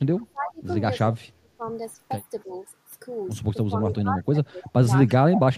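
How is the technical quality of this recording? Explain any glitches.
The recording has two call-processing faults that affect the speech.

Echo leak occurs at 0.19 to 0.52 s, 3.98 to 4.02 s and 4.62 to 4.69 s. A faint delayed copy of the speech trails the original by about 0.32 s. It sits around 20 dB below the speech at first and nearer 30 dB below later. The likely cause is a far-end loudspeaker echo that the echo canceller failed to remove.

Speech suppressed in double talk occurs at 0.23 to 0.66 s, 1.02 to 1.63 s, 2.44 to 2.61 s, and from 3.64 s to the end. The speech dips or breaks up by roughly 25 dB, 30 dB, 10 dB and 25 dB respectively. This is likely an echo canceller that could not separate its own talker from the loudspeaker echo and attenuated both.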